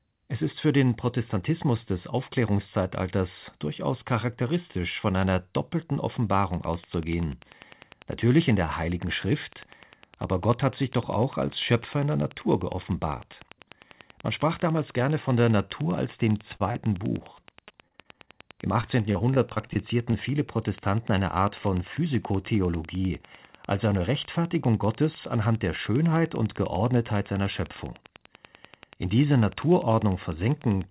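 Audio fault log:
6.34–30.91 s, train of clicks: From 6.34 s to the end, a steady tick repeats ten times a second at regular spacing, with peaks a little above the level of the speech. It is audible through pauses as well as over talking. The sharp, identical pulses at a fixed rate point to an outside source, likely electrical interference or a struggling interface, rather than anything in the call path. Dropouts are irregular and change the speech itself.
16.56 s, short stall from a late packet: For about 38 ms the sound is held in place, a sustained smear with a faint buzz, and then the speech carries on from exactly where it stopped. Nothing is lost, but everything after this point arrives 38 ms later. A packet came late and the jitter buffer stretched the last sound while it waited. Unlike a concealed loss, no part of the speech is skipped.
16.72 s, short concealed packet loss: About 20 ms of speech never arrives and is covered by 26 ms of synthesised continuation, heard as a brief smear or wobble that blends back into the real audio. 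Unlike the stall just before it, the speech does not resume where it left off. That fragment is gone, and a short consonant there could vanish entirely.
17.18–18.29 s and 18.81–20.15 s, repeated packet loss (robotic sound): In these two stretches, holes keep arriving, 11 in the first and 9 in the second, none longer than 26 ms. Each hole is patched, about 19% and 12% of each span, so the speech turns choppy, and about 160 ms is missing in each stretch. A single concealed loss gives one smear. Here the patches run into each other and produce a robotic texture. Throughout the clip, the narrowband sound with nothing above 4 kHz fits a 64 kbps G.711 mu-law call.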